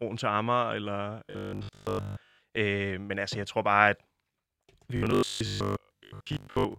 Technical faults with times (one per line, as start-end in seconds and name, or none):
1.25-2.39 robotic sound from repeated short buffers
4.97-6.78 robotic sound from repeated short buffers